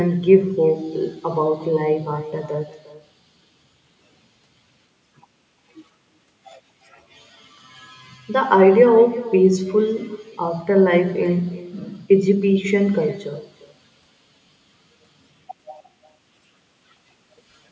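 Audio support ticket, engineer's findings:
Echo with no canceller, whole clip. Far-end loudspeaker feeds its mic uncancelled. Speech returns around 0.4 s later, about 18 dB down, thin.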